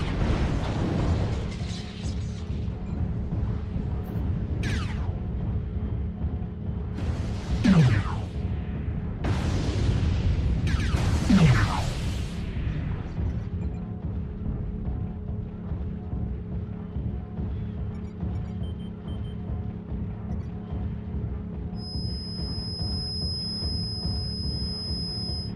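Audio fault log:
21.73–25.55 s, feedback whistle: a thin, steady tone at 5.1 kHz sits roughly 10 dB below the sound through to the end, swelling and fading slowly in level. This is likely a loudspeaker-to-microphone loop held just short of runaway. On a spectrogram it shows as one narrow, bright horizontal line.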